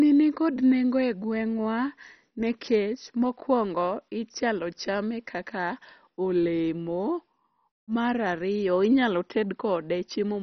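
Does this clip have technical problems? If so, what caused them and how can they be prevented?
Yes. Throughout the speech the sound is dull and muffled, with nothing above about 6.1 kHz, and a gurgling, granular roughness rides on the voice. This is likely MP2 compression at heavy settings, consistent with a very low bitrate such as 32 kbps. MPEG Layer II divides the signal into 32 sub-bands and shares out bits among them. Starved of bits, it shuts off the upper bands entirely and quantises the rest coarsely, so they flicker and grind. To prevent it, encode at a much higher bitrate or with a more efficient codec.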